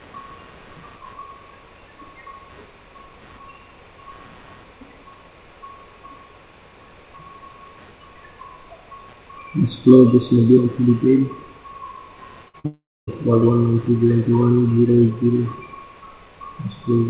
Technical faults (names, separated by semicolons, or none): computer activity noise; burst of packet loss; short concealed packet loss; long network dropout